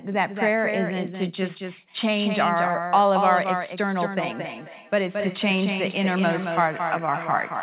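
From the start, every sound is heard twice. A second full-band copy trails the first by about a fifth of a second and sits roughly 5 dB lower. This is a doubled audio track. The copy has no decay and no added room tone, so it reads as a clean repeat rather than a reflection. The likely cause is the same speech being captured again through a slower path, or an edit that left two copies out of step.

At 4.19 s a second fault joins it and lasts to the end. This is feedback echo between two devices. One device on the call plays back what another microphone in the same room sent. That microphone picks it up and sends it round again. Each echo canceller only removes its own device's output. The speech returns about every 300 ms, thinner and more ringing each pass. The loudest repeat is about 13 dB below the speech. The call path itself is G.711 mu-law at 64 kbps, so nothing sounds above 4 kHz.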